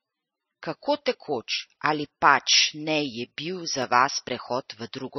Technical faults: MP3 compression; block of digital silence

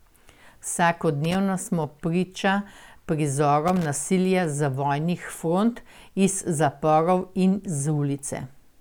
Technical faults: loose connector crackle

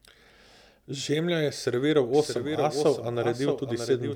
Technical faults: doubled audio track

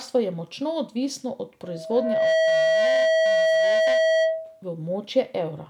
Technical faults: loudspeaker feedback squeal

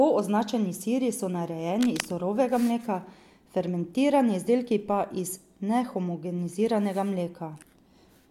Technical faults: cable scratch noise

